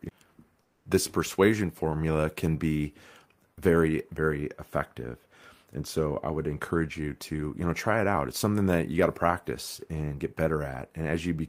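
From 0.61 to 0.85 s, about 240 ms, comes comfort noise in place of the background: a steady, featureless hiss about 4 dB quieter, likely from Opus discontinuous transmission. A spectrogram shows a smooth, textureless noise band, and the waveform envelope looks flat.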